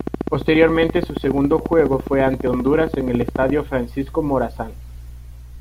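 A speech recording carries a train of clicks from the very start to 3.5 s: about fifty regular ticks at 14.6 per second, roughly 10 dB above the speech and audible in pauses too, likely interference from nearby equipment or a faulty connection or power supply. A spectrogram shows evenly spaced thin vertical broadband lines, and the waveform shows matching sharp spikes.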